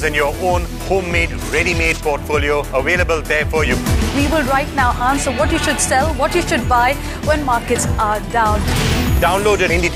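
From 8.75 to 9.96 s, a filter restarted on every block starts each block from silence, producing a level-following 23.4 Hz buzz, visible as evenly spaced spectrogram stripes.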